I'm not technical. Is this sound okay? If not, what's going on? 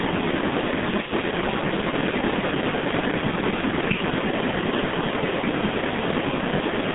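No. The G.723.1 codec affects the whole clip: this old internet-phone compression drops everything above 3.8 kHz, leaving speech muffled and hoarse, with blurred consonants.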